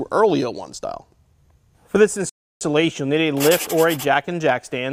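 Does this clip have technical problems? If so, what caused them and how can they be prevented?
Yes: a rebuffering stall from 2.29 to 2.61 s. The player drained its downloaded audio, fell silent for 316 ms, then picked up exactly where it stopped, so nothing is lost but time is added. A larger playback buffer or adaptive bitrate prevents it.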